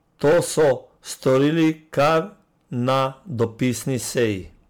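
Hard clipping runs through the whole speech clip. The level was driven about 11 dB beyond what the signal path could carry, so roughly 7 percent of samples have their peaks sheared flat. Those squared tops add harsh upper harmonics, heard as a gritty fuzz on every louder syllable.

Generation loss is also present throughout. The sound is swirly, smeared and hollow, consonant attacks blur, and nothing sits above 19.9 kHz. That degradation is beyond a single encode and fits a likely cause of around ten successive MP3 passes near 130 kbit/s, each requantising on a shifted frame grid.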